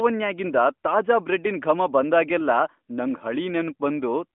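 No technical faults can be heard anywhere in the recording. The speech comes through the AMR narrowband mobile codec at 12.2 kbps, so it sits in a phone-line band of roughly 200 Hz to 3.5 kHz with nothing above 3.6 kHz and only light coding texture.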